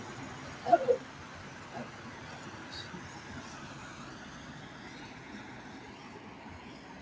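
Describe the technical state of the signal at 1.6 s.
At 1.6 s the audio is intact, with the sound passing cleanly through the call's microphone processing and G.722 codec path, which leave nothing above 8 kHz.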